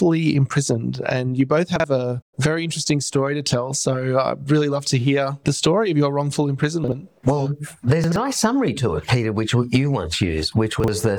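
Chunks out of order at 1.76–1.84 s, 6.84–6.92 s, 8.04–8.16 s (two chunks late) and 10.8–10.88 s: 40 ms blocks play late, giving brief jumbled stumbles.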